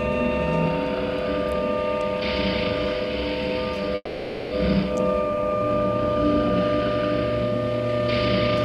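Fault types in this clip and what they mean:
Call audio freeze: from 3.95 to 4.53 s the sound smears into a fading buzz, then resumes intact but 560 ms late, likely from delayed packets emptying the jitter buffer.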